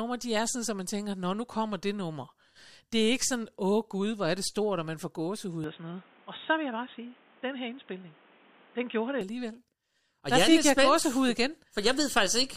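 The input likely switched to a poorer device after "og man får gåsehud", so from 5.64 to 9.21 s the speech turns dull, with nothing above 3.8 kHz and faint new background noise.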